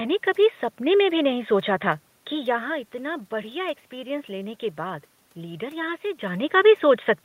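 Nothing stood out on listening to this speech recording; the quiet room noise underneath and the level shifts around 2.5 s and 6 s, where the talker seems to move relative to the microphone, belong to the recording itself.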